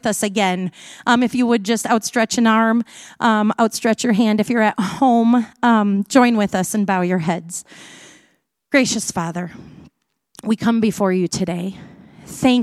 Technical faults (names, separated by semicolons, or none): none